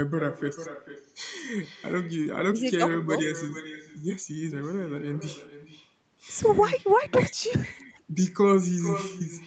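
Throughout the speech, an echo with no canceller trails every phrase: the far end's loudspeaker feeds its microphone, returning a thinner copy about 11 dB down, roughly 400 ms late. A spectrogram shows each syllable's pattern faintly repeated, band-limited below 8 kHz.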